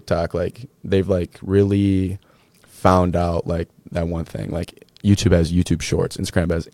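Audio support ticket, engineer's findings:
Nothing stood out on listening; no findings to log for this speech clip.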